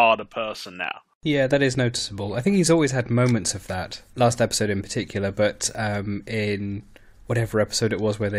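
No technical faults are audible anywhere in the speech recording.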